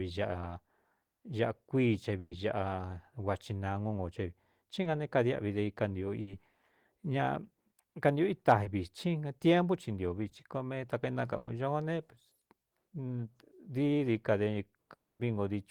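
At 2.19 to 2.33 s the speech stalls into a held, fading sound lasting about 120 ms. The last 20 ms of it is silent before the audio picks up further along. This is a burst of packet loss: several consecutive packets never arrived in time, so the receiver stretched the last sound and let it decay. The stretch of speech in that gap is gone.

At 4.83 to 4.87 s there is a brief smear, the first short concealed packet loss. About 20 ms of audio failed to reach the decoder, and the receiver covered the hole by extending the preceding sound and blending back into the real signal.

At 6.21 to 6.29 s a second burst of packet loss shows up as a shorter held, dimming sound of about 60 ms, with the speech resuming past the lost portion.

The same quick wobble recurs at 8.63 to 8.67 s and at 10.29 to 10.33 s. Each is another short concealed packet loss of about 20 ms, filled by continuing the last sound, so a brief consonant can slip away.

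At 11.37 to 11.49 s a third burst of packet loss fills about 100 ms with a fading continuation that never reaches silence. The speech then jumps ahead.

Near the end, at 14.93 to 15.21 s, the sound gives a very brief trailing continuation and then drops to near-silence for about a quarter of a second. This is likely a long network dropout, in which no audio arrived for that stretch and the receiver's fill faded out almost at once.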